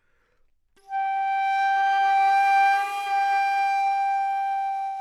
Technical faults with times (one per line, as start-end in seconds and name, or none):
none